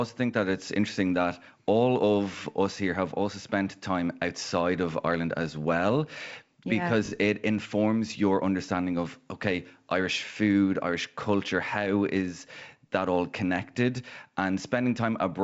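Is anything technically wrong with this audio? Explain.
No, nothing technically wrong can be heard here.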